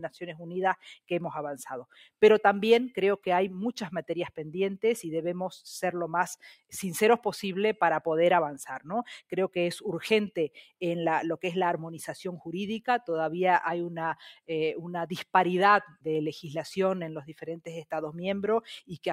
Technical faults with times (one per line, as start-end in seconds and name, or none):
0.00-19.13 noise suppressor applied to music or sounds
1.90-2.10 sound cut by the noise suppressor
15.88-16.06 sound cut by the noise suppressor